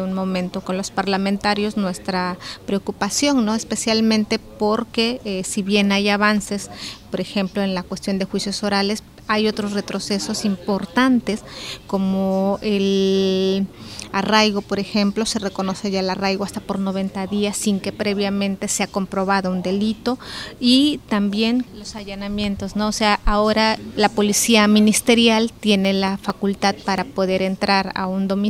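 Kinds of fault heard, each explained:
CD scratch ticks: a blemish on the disc wipes out more data than error correction can rebuild, once per revolution, so the player patches or mutes the damaged bit and you get a regular tick. Here there are two bursts, four ticks from 21.76 to 22.44 s and seven from 25.62 to 26.98 s, each tick only a few milliseconds long, ticking along at roughly five or six a second.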